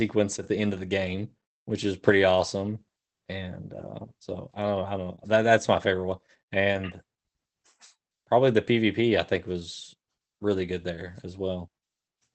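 A speech recording carried over an Opus call path at 24 kbps, with the content cut off above 8 kHz. At 5.15 to 5.20 s, just before "that that's my favorite", there is a short concealed packet loss. About 20 ms of audio never arrived in time, and the decoder covered the gap by extending the preceding sound before crossfading back. It is heard as a brief smear or wobble. On a spectrogram it shows as a narrow band where the harmonics run unnaturally flat or turn to diffuse noise.

At 6.74 to 6.80 s, right after "that's my favorite one", comes a lost packet rebuilt from error correction. The sound stays continuous but turns rougher and noisier for about 40 ms, which points to two lost packets replaced by the low-bitrate copies carried in the following packets. A spectrogram would show grainier, less defined harmonic detail across that strip rather than any gap.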